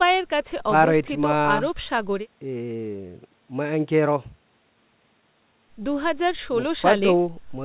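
Clock drift between sender and receiver runs through the whole clip: the sending side's clock runs about one percent slower than the receiving side's, so the jitter buffer keeps draining faster than it refills. To stay in step, the receiver repeatedly stretches or repeats short slivers of audio, and the buffer may briefly run dry. The result is small, uneven timing hiccups scattered across the speech, a stumbling rhythm heard against the narrow, telephone-like band that stops near 4 kHz.

A short stall from a late packet occurs at 2.77 to 2.79 s. A packet arrived after it was due, leaving the jitter buffer empty, so the receiver held the preceding sound for about 18 ms until the data came in, then resumed from the same point with nothing lost. It sounds like a brief smear or freeze, perhaps with a slight buzz or dip, and everything after it lands about 18 ms later.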